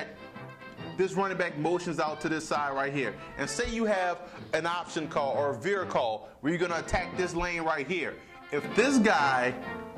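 A sudden gain jump at 8.64 s lifts the audio and its background noise together by about 5 dB, and that higher level holds to the end of the clip. The likely cause is a digital gain change applied from one sample to the next, with no ramp. On a waveform the envelope steps up abruptly at that instant; on a spectrogram every frequency band, including the noise floor, brightens at once along a sharp vertical edge.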